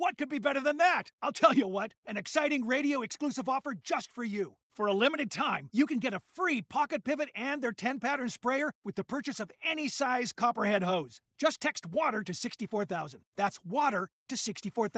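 Nothing here stands out as a fault; the sound just carries the usual character of a call, with nothing above about 8 kHz, which fits a wideband call codec and the microphone processing in front of it.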